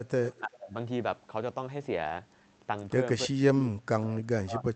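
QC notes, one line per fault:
0.25–0.40 s, echo leak. A faint delayed copy of the speech sits under the talker, arriving 338 ms late and roughly 15 dB down. The likely cause is a far-end echo canceller letting loudspeaker pickup through.
0.40–0.73 s and 3.27–4.75 s, speech suppressed in double talk. The talker's level sinks and breaks up while the other side is active. The dip reaches about 25 dB in the first stretch and about 35 dB in the second, which runs to the end. This is likely an echo canceller ducking both voices during overlap.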